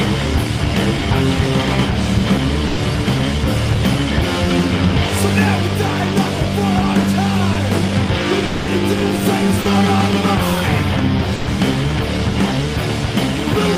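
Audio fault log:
0.99–1.03 s, 7.53–7.57 s, 9.61–9.67 s: short concealed packet loss. Brief smears of 20, 20 and 40 ms. A few hundredths of a second never reached the decoder in time, so the receiver extended the preceding sound across each gap and then blended back into the real audio.
2.67–2.79 s, 11.35–11.49 s: burst of packet loss. Consecutive packets went missing, about 100 ms and 120 ms of audio. The receiver stretched the last sound into a held, fading buzz or hiss, with no silence, and the audio resumes further on without the lost part.
8.45–8.69 s: long network dropout. About 220 ms of sound is replaced by a continuation of what came before, fading as it goes, and then the audio picks up further on with that stretch gone. The likely cause is a network interruption that stopped packets arriving.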